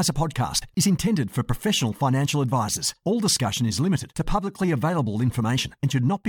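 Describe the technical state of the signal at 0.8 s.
A gap at a join of encoded pieces sits just before that point, from 0.74 to 0.77 s, a silence of about 27 ms that ends right as "is intended for professional" begins. The speech was encoded in separate pieces and butted together without trimming, so one run's padded final frame and the next run's start-up delay both remain. The speech drops out abruptly, with smeared edges, then resumes exactly where it left off.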